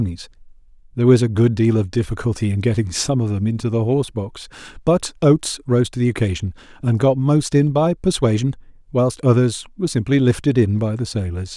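No technical faults can be heard in this speech recording at any point in its duration.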